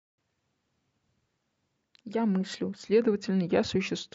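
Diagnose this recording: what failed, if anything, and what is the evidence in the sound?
A drift correction step, likely from clock-matching software at the driver or buffer stage changing its playback rate to refill its buffer, slows the speech by 5.37% from 2.82 s to the end. Speed and pitch drop together, by 95.5 cents, nearly a semitone.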